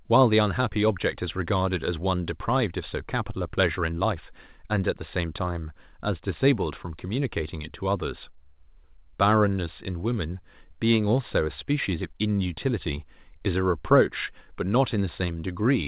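No faults are present; the speech arrives over an ordinary mu-law telephone path at 8 kHz, so nothing above 4 kHz comes through and a faint quantisation hiss rides with the level, as expected for that format.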